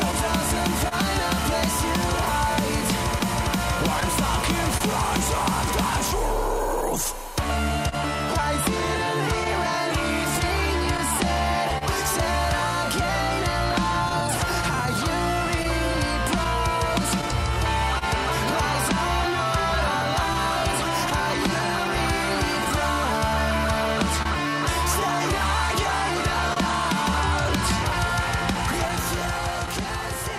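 Small timing hiccups run through the whole recording, the signature of clock drift between sender and receiver: the sending clock runs roughly 1.5% slow, so the receiver's jitter buffer keeps draining and must repeat short pieces. The hiccups arrive at uneven intervals from start to finish, tracking the steady rate mismatch rather than any single network event. Layered on top are scattered short gaps from 0.11 s to 29.70 s: about twenty lost or late packets, each hole 30 ms or shorter, patched by extending the preceding sound. Together they cover around 0.4 s, roughly 1% of that span, and are heard as brief ticks or smears. Unlike the drift, each gap is an isolated dropout rather than part of a continuous correction.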